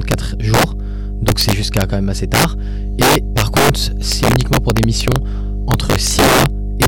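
A ground loop or nearby transformer is coupling the 50 Hz power line into the signal for the whole clip. The result is mains hum, a steady low drone at a strong level, close to that of the speech itself.

Integer overflow occurs at 0.11–0.14, 0.54–0.64, 1.28–1.82, 2.34–2.44, 3.02–3.70, 4.12–5.16, 5.71–6.46 and 6.82–6.86 s. In each span, loud speech peaks exceed the integer limit by about 2 to 7 dB and wrap to the opposite sign instead of being held, producing violent cracks far harsher than clipping.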